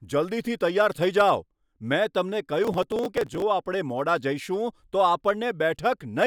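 A speech recording with processor overload crackle from 2.65 to 3.42 s. The system could not finish its very short audio buffers, around 1.5 ms each, on time, and dozens were skipped outright, so the sound is chopped by tiny gaps with hard edges that read as gritty tearing until the load clears. On a waveform this shows as a run of small dropouts and abrupt steps; a spectrogram shows dense thin vertical broadband streaks across that span.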